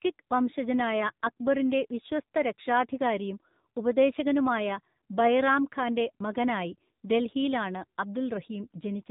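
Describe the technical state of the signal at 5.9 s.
At 5.9 s the speech is still passing through the AMR narrowband mobile codec that affects the whole clip. The signal has been squeezed into a low-rate telephone model that rebuilds the vocal tract from a few pulses per subframe, and the plainly audible coarseness fits a mode around 7.4 kbps. Nothing above 3.8 kHz survives, so the speech sounds muffled and boxy, with a buzzy, synthetic edge.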